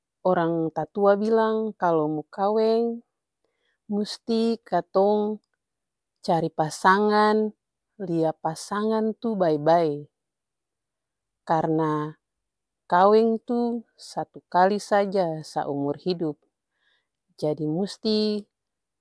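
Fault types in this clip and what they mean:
Nothing stood out on listening to this speech recording.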